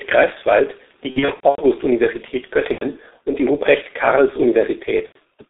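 Speech runs through a G.723.1 codec for its whole length, with heavy damage. Nothing sits below 250 Hz or above 3.7 kHz, so the voice is thin and muffled. The codec's slow-moving voice model smears consonants and adds a hoarse, rough texture. The coarse quality points to a very low bitrate, around 6 kbit/s.

VoIP packet loss concealed by the speech codec breaks in three times. From 1.10 to 1.64 s, gaps are scattered across about 480 ms. Around 300 ms of that is missing, with the longest single gap about 90 ms. Shorter gaps of about 90 ms each fall at 2.72 to 2.85 s and 5.06 to 5.17 s. Each short gap fits three lost 30 ms frames. In each gap, the decoder stretches the last pitch and filter into a buzzy tone or coloured noise that fades. The voice stays weak or distorted briefly after the audio returns.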